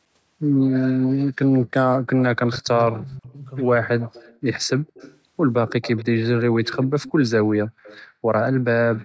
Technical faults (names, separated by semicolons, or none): speech suppressed in double talk; echo leak